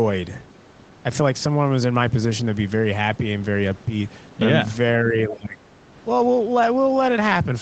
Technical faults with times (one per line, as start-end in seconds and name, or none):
5.05-5.60 speech suppressed in double talk